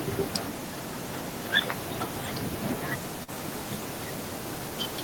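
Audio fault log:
3.23 to 3.30 s, short concealed packet loss: about 40 ms never arrived, so the decoder stretched the previous sound across the gap, leaving a quick smeared wobble before it blends back.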